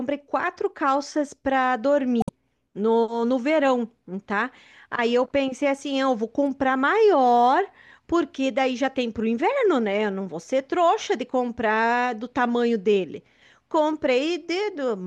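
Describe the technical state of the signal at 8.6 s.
At 8.6 s the speech signal is intact, with no audible technical fault at that moment.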